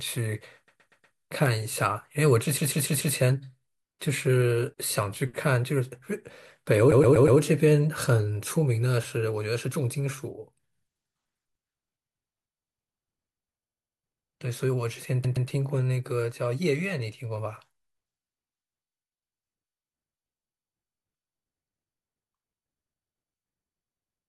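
Repeated frames stutter the speech five times: 0.67 to 1.15 s, 2.57 to 3.15 s, 6.91 to 7.39 s, 13.63 to 13.99 s and 15.24 to 15.48 s. A short stretch of coded audio was written more than once, so the same fragment replays back to back. The blocks are 120, 144, 120, 72 and 120 ms long, repeated two to five extra times, which fits runs of several frames. Unlike an echo, each copy is identical and full level, and each event adds 240 to 576 ms.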